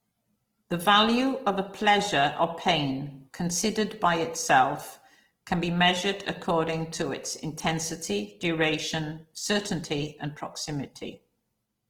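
Throughout the speech, the sound is rough and grainy, with noisy texture filling the highs rather than leaving holes. The cause is likely Opus compression, starved of bits at a rate that fits 16 kbps. Unlike MP3, there is little swirling.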